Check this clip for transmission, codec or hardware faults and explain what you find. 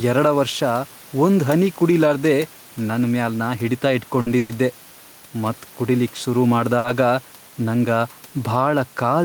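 Three kinds of fault turn up in this speech: gain pumping through the whole clip, two short stalls from late packets, and one call audio freeze.

Gain pumping runs throughout. The gain is likely set too high, so a fast limiter clamps down on every loud syllable and releases in the pauses. The room noise sits about 28 dB below the speech, and the gain swings by roughly 5 dB, leaving the speech squashed.

Short stalls from late packets occur at 4.21–4.29 s, just after "ನನ್ ಮ್ಯಾಲ್ ನಾ ಹಿಡಿತ", and at 6.78–6.87 s. In each, a packet missed its slot, the jitter buffer ran dry, and the receiver stretched the last sound for about 50 ms and 60 ms respectively. Nothing is lost, but a sound hangs on with a faint buzz or dip.

A call audio freeze follows at 4.38–4.52 s, shortly after the same phrase. Packets were likely held up in transit and the buffer emptied again, so the receiver spun the last sound into a fading buzz or hiss for about 110 ms, never dropping to silence. 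The speech then resumes where it stopped, with a gap inserted.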